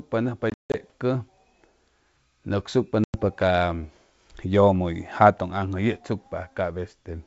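A wideband speech recording, carried over G.722 telephone coding with faint coding damage at most, shows packet loss on an ADPCM call twice. From 0.50 to 0.76 s, about 200 ms goes silent in hard-edged gaps scattered over 240 ms, the longest lasting 160 ms, which points to around ten lost packets. From 3.04 to 3.22 s, roughly 100 ms drops out. After each hole, the decoder's predictor and step size no longer match the sender's, so speech resumes slightly distorted before settling.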